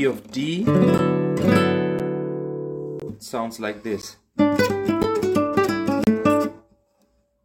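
Six short dropouts to silence recur roughly once per second, at 0.98 s, 1.99 s, 3.00 to 3.02 s, 4.02 s, 5.03 s and 6.04 to 6.07 s. Each is a gap between stream segments: the player assembles the audio from 1-second segments whose timestamps do not quite meet, and it fills the mismatch with silence. The holes have hard edges and last about 9 to 32 ms, the longest at 6.04 s. No audio is lost.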